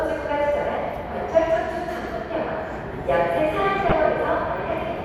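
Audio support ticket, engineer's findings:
DAB burbling, 2.05–2.09 s and 3.82–3.92 s: short noise blips in single sub-bands. Weak-reception bit errors slipping past error correction into the MP2 audio data. Error rate around 0.2% and 0.15%.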